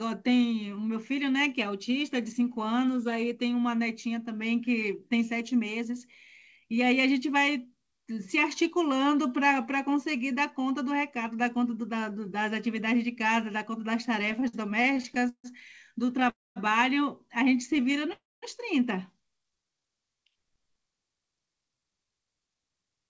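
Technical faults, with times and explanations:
14.22–16.28 s, repeated stalls (stutter): Packets reached the receiver more slowly than the audio was played, so the jitter buffer emptied 17 times. Each time the last sound was stretched to cover the gap, the longest lasting 148 ms. About 18% of this stretch is filled-in sound, and none is lost, so the speech drags and stutters.
16.30–16.58 s, call audio freeze: Packets were likely held up in transit, leaving the jitter buffer empty for 260 ms. The receiver extended the last sound briefly, then faded to silence for about 220 ms before resuming where it stopped, inserting a gap with nothing missing.
17.56–18.09 s, jitter buffer slow-down: With the buffer running low, the receiver repeated single pitch periods to build a reserve, adding 41 ms. Speech plays at 93% speed with unchanged pitch, so sounds are drawn out.
17.67–18.13 s, repeated stalls (stutter): Late packets emptied the jitter buffer 6 more times, with gaps of 14 ms or less, each bridged by continuing the last sound. 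About 11% of the span is filled in and nothing is lost, giving a stutter over the slowed passage.
18.13–18.44 s, call audio freeze: Packets were likely delayed again, and the buffer ran dry for 294 ms. The last sound was carried on and faded, followed by about 210 ms of silence. Playback then resumed from the same point, so the speech is pushed later.
19.39–19.86 s, jitter buffer slow-down: The receiver again topped up a thin buffer by repeating pitch periods, adding 75 ms. Speech runs at 86% speed at the same pitch, so it sounds stretched, with drawn-out sounds.
21.31–23.05 s, jitter buffer speed-up: The jitter buffer held more audio than its target, so the receiver repeatedly removed short pieces of one or a few pitch periods, about a fifth of a second in total. Speech plays at 113% speed with unchanged pitch and sounds hurried.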